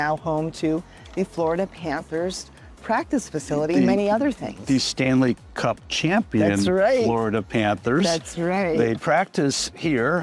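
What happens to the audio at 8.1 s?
Nothing goes wrong at 8.1 s; the audio plays through that point intact, with no dropout, click or other fault.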